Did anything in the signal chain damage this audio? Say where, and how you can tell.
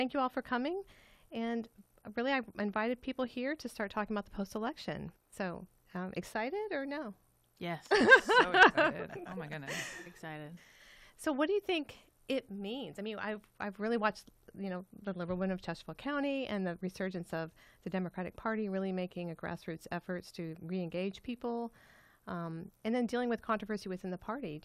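No, nothing in the signal chain has damaged this audio. No stage leaves any audible mark on the sound.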